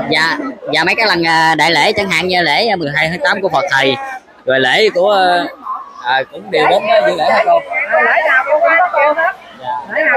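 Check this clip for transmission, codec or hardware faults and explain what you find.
One fault is present. From 0.0 to 2.83 s there is a section at the wrong speed: the sound runs 1.12 times too fast, raised by about two semitones, likely from playback against a mismatched clock. Pitch and tempo shift together, which separates it from a pitch-only shift.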